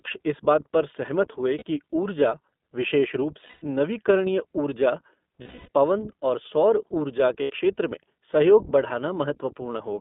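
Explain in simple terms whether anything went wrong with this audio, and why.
The whole recording passed through the iLBC codec, a phone-call codec that removes everything above about 3.6 kHz and leaves the speech slightly rough and synthetic. Lost iLBC frames then create four held, buzzy vowel-like patches at 1.58–1.63 s, 3.46–3.64 s, 5.42–5.69 s and 7.42–7.52 s. These are not silent dropouts, and the voice recovers almost immediately after each one.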